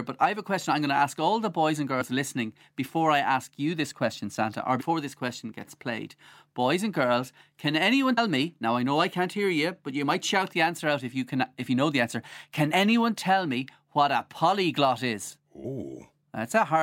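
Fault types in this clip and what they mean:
Compressed frames skipped: speech jumps ahead five times with a brief smeared blip, not a click, at each join. Whole compressed frames, consistent with frames of about 26 ms, go unplayed, losing about 70 ms each time, or about 150 ms after "and girls can anyone".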